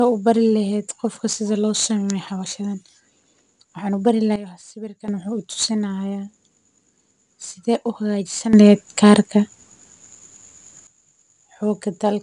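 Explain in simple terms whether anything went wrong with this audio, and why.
Two things went wrong. Throughout the speech there is 4-bit ADPCM compression, an old way of squeezing audio that stores each sample as a rough step. It leaves a gritty hiss, and the very top of the sound is cut away. Unlike steady background hiss, this grit gets louder when the voice does and fades in pauses.

There are also two sudden gain jumps, most likely a volume setting snapping instantly instead of easing. From 4.36 to 5.08 s everything abruptly drops quieter, and from 8.53 to 10.87 s it abruptly gets louder. Unlike a speaker simply changing their voice, the background noise steps up and down along with the speech.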